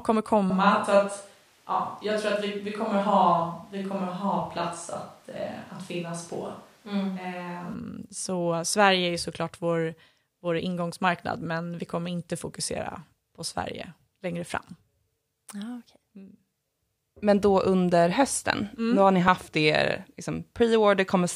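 From 0.50 s to 7.74 s the speech sounds like it was picked up by a distant microphone. This is likely a switch away from the close microphone, perhaps to one on a camera. The sound turns roomy and hollow, with thinner bass, while the level stays about the same. On a spectrogram the low end is weaker, reverberant tails smear each syllable into the next, and a noise floor roughly 35 dB below the speech fills the gaps between phrases.

At 19.28 s there is a dropped buffer (overrun). A tiny slice of audio, only a millisecond or two, is missing, and the sound on either side is butted together with no silence between. This likely happened because the recording software fell behind and the hardware overwrote samples before they were collected. The result is a small jump forward in the sound. On a waveform the cycle breaks off and resumes at a different phase, leaving a sharp step.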